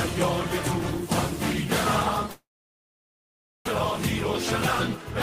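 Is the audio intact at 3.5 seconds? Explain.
No. At 3.5 s you're inside a long network dropout running from about 2.31 to 3.69 s, most likely packets that never arrived. The receiver stretches the last sound into a buzzy tail that fades, and most of the gap, about 1.2 s, is flat silence. When audio resumes at 3.69 s, roughly 0.82 s of material is simply gone, and the timing has shifted by around half a second.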